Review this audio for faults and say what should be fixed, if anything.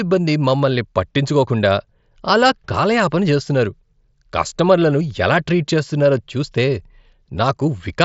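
Nothing here needs fixing: it's speech carried over a Bluetooth mSBC headset link, with the usual wideband ceiling around 7.7 kHz, and no faults turn up anywhere in it.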